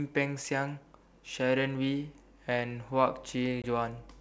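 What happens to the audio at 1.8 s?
Nothing goes wrong at 1.8 s; the speech runs on intact through that moment, carried by G.722 wideband telephone coding with at most a faint trace of its upper-band hiss.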